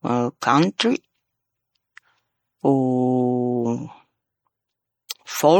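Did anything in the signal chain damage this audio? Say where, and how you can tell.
Yes. Throughout the speech there is a plainly audible watery, swirling texture, with consonants sounding smeared rather than crisp. This points to the codec stage, likely MP3 compression at a low bitrate on the order of 48 kbps. With that few bits, the encoder keeps only the spectral lines its hearing model rates as important and drops weaker ones. Those lines flicker on and off from frame to frame, producing the burbling quality.

Pre-echo from the same codec can be heard as a hiss just ahead of sharp onsets at 0.40 s, 0.78 s and 5.09 s. It runs for about 19 ms, 13 ms and 18 ms respectively, so each attack lands blunted. This happens because quantisation noise gets spread across an entire transform block. When a sudden attack sits late in that block, noise sized for the loud part leaks into the quiet moment before it.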